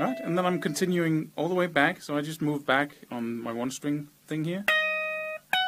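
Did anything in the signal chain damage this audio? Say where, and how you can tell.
No, nothing in the signal chain damaged this audio.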